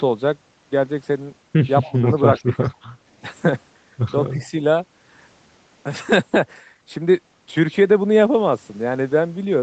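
At 1.83 to 1.92 s, an echo leak, likely an echo canceller on the loudspeaker side letting its microphone pickup through, returns a delayed copy of the speech 274 ms late, about 20 dB down. Overlapping it from 1.88 to 2.05 s, speech suppressed in double talk, likely the canceller turning down both talkers at once, dips the voice about 10 dB in short patches. The same suppression returns at 2.42 to 2.64 s, cutting the speech deeper, about 20 dB. Right after, at 2.63 to 2.77 s, the echo leaks back at the same 274 ms delay, now much fainter. A final suppression dip of about 10 dB comes at 4.33 to 4.57 s.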